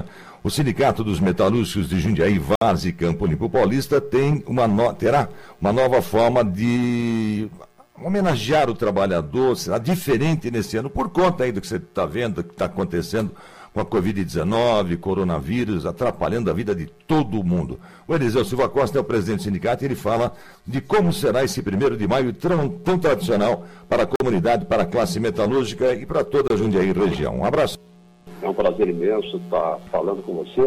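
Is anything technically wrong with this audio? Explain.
Yes. There are three brief dropouts to silence, at 2.55 to 2.61 s (59 ms), 24.16 to 24.20 s (46 ms) and 26.48 to 26.50 s (24 ms). Each time the sound cuts out completely and then resumes. These are likely Bluetooth stalls: radio interference delays packets, the receiver's buffer empties, and output halts until retransmitted data arrives.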